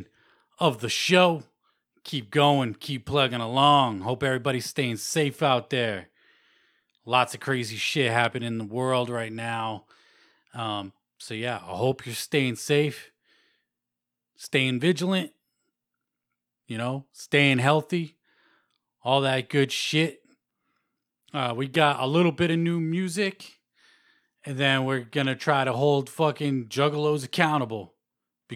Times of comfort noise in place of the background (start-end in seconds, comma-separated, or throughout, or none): none